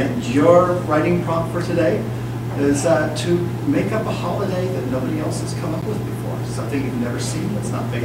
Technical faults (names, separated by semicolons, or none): block of digital silence